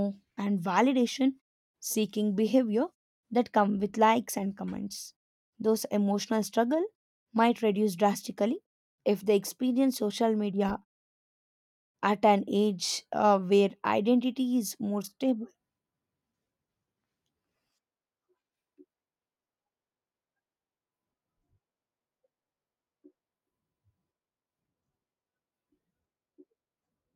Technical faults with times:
none

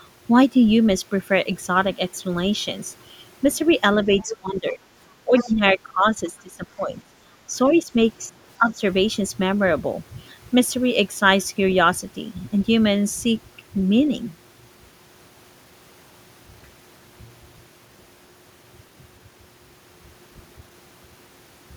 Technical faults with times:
4.10-4.79 speech suppressed in double talk
4.16-4.37 other side's voice leaking through
5.24-7.14 speech suppressed in double talk
5.37-5.49 other side's voice leaking through
7.47-7.91 speech suppressed in double talk
8.29-8.82 speech suppressed in double talk

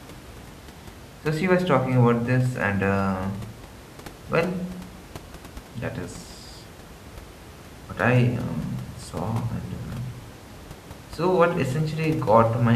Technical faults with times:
none

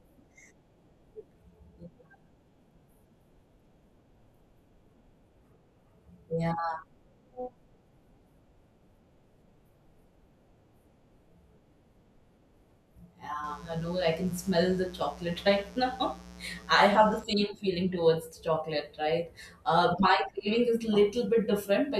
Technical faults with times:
13.44-17.24 mains buzz

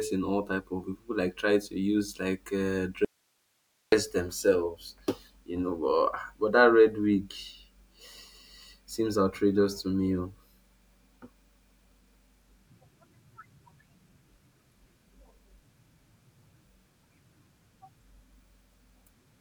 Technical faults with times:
3.05-3.92 audio dropout to a faint residue

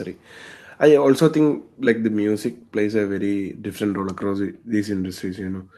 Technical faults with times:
none

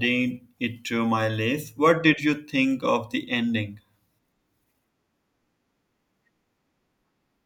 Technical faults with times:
none

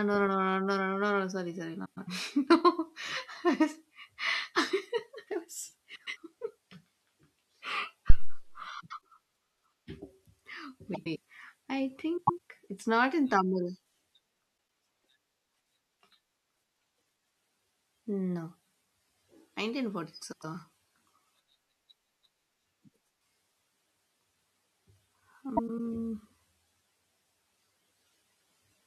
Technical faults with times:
1.85-2.08 frames out of order
5.95-6.18 frames out of order
8.10-8.48 phantom power thump
8.80-8.99 frames out of order
10.94-11.17 frames out of order
12.17-12.38 frames out of order
14.56-14.77 frames out of order
20.21-20.44 frames out of order
25.57-25.80 frames out of order

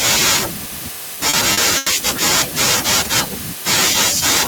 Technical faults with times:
1.15-1.88 repeated stalls (stutter)

